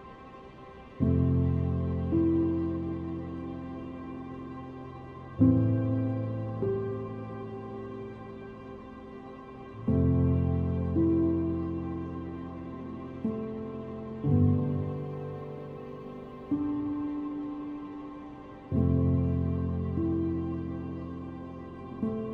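No technical faults detected.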